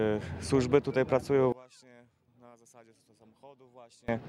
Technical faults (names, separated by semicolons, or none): one channel inverted